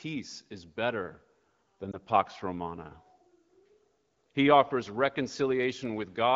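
Speech clip carrying one lost AMR speech frame at 1.91 to 1.97 s, just after "is better than". The decoder, missing a frame, repeats the previous pitch and vocal tract parameters at reduced gain, heard as a short dip or warble, consistent with a single lost 20 ms frame. Audio returns briefly weak before recovering. The AMR wideband (HD Voice) path, whose band and light coding roughness fit a rate near 12.65 kbit/s, runs throughout.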